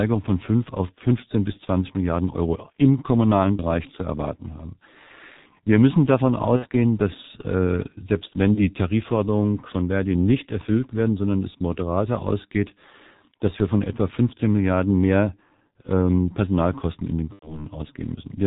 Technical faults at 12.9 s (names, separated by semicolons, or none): G.723.1 codec